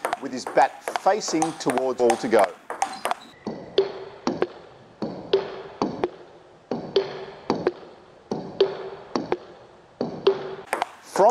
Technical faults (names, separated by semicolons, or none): skip ahead; jitter buffer speed-up